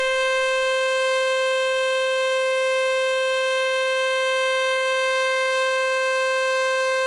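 From start to finish the music has a hard ceiling at about 10.7 kHz, with nothing above it, and the treble that's left sounds hissy and grainy. That's likely Vorbis compression pushed hard, at a rate that fits something as low as 24 kbps. The encoder cuts the top band and quantises what remains so coarsely that fine detail turns into noise of similar energy, which roughens sustained tones and smears attacks.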